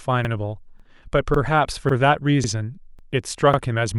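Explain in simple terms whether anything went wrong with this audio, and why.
Something did go wrong: the speech has overlapping chunks. The audio was handled in half-second pieces, and each new piece began about 48 ms before the previous one ended, so that sliver plays twice. You hear a small stutter or click at 0.25, 0.80, 1.34, 1.89, 2.44, 2.99 and 3.54 s. Unlike a dropout, nothing is missing. A bit is repeated instead, and the hiccups arrive at a steady rhythm rather than at random.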